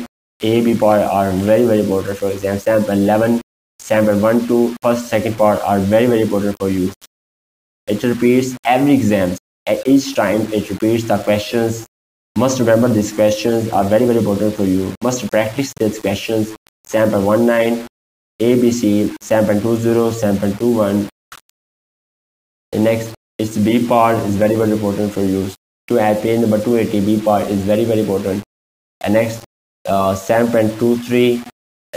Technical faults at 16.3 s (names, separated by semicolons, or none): low bit depth without dither